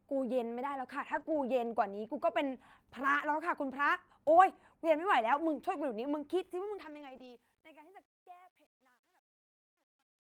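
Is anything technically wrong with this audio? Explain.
Yes, there are three kinds of fault in this speech recording.

Lost packet rebuilt from error correction, at 1.07–1.21 s, 1.27–1.37 s, 4.49 s, 5.33–5.39 s, 6.81–7.15 s and 7.21–7.27 s. Packets went missing, and the decoder played the low-bitrate backup copies carried in the following packets instead. There are no gaps, but those stretches sound rougher and noisier. The longest is about 180 ms, around 7 s.

Short concealed packet loss, at 1.23–1.27 s and 7.17–7.21 s. About 20 ms arrived too late each time, with no backup copy. The receiver extended the preceding sound to fill the hole, then blended back into the real audio, leaving a brief smear or wobble between the rebuilt stretches.

Truncation distortion on a fade, from 6.37 s to the end, worst from 7.57 s. The fade-out starts around 6.4 s. However, the fading stage kept too few bits, which fits roughly 11 bits, and added no dither. 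As the level drops, the waveform coarsens into steps, so the tail turns gritty.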